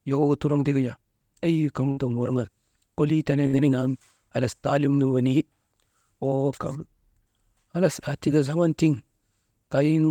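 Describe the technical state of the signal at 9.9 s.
At 9.9 s the speech signal is intact, with no technical fault present at that moment.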